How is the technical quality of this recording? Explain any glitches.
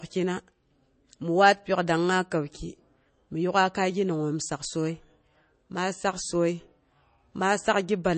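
The quality is limited. The speech carries the marks of heavy compression for its whole length, whatever the file's size suggests.

Throughout, it sounds like low-bitrate audio saved at a high bitrate. Nothing is present above about 8.3 kHz, and the sound has the swirly, smeared texture of strong MP3 data reduction. The likely cause is an MP3 at a very low rate, around 32 kbit/s, re-encoded as a high-rate MP3 such as 320 kbit/s. The second pass keeps the damage but cannot restore what the first discarded. A plain low-pass filter would dull the top without adding that swirl.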